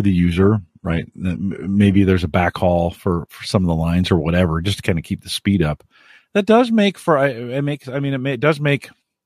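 From 0 to 2.0 s the player plays an adaptive stream starting at a low bitrate, consistent with 16 kbit/s HE-AAC, before stepping up to roughly 96 kbit/s AAC-LC. Until then speech stops at 11.8 kHz, with synthetic treble and stronger codec artefacts, then improves without a gap before "there's a backhaul for".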